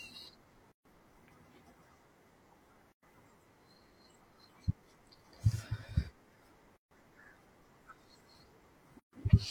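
Speech that drops out into silences four times, at 0.72, 2.92, 6.77 and 9.00 s, lasting about 134, 107, 144 and 134 ms, then resumes exactly where it stopped. These are gaps at joins of encoded pieces, left by encoder start delay and last-frame padding that were never trimmed.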